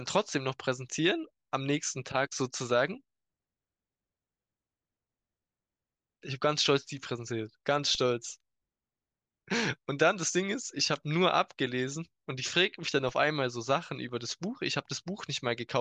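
At 7.95 s and again at 13.09 s, a DC step of about -36 dBFS shifts the zero line, heard as a low thump before decaying through a 20 Hz high-pass.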